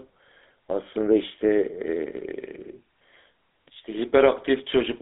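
Throughout, the speech went through a GSM full-rate codec, consistent with 13 kbps coding, cutting everything above 3.8 kHz and adding a plainly buzzy, gravelly roughness.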